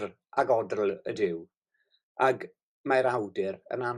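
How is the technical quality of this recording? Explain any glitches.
No audible glitches or faults.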